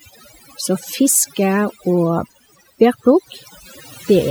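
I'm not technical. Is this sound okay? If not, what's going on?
No. The speech has overdone noise removal from start to finish. A noise-cleaning tool was pushed too hard. It works by muting narrow slices of the sound whenever they look like background hiss, and at this strength it also mutes the quieter parts of the voice. That leaves the background lower, broken up into small twinkling specks.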